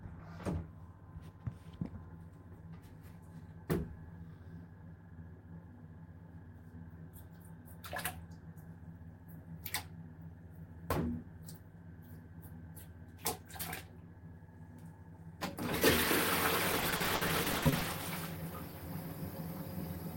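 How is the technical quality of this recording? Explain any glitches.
The recording has one clear glitch: a burst of repeated packet loss (robotic sound) from 16.72 to 17.87 s. Across that stretch, chunks of the stream failed to arrive or arrived too late, one after another, and the receiver papered over each hole by extending the last good fragment. About 440 ms went missing in total, with gaps as long as 70 ms, so roughly 38% of that second is concealed. The result is choppy, with pieces of the audio dropping out.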